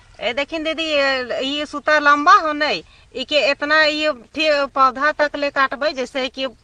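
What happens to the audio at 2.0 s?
Nothing goes wrong at 2.0 s; the audio plays through that moment intact, with no dropout, click or distortion.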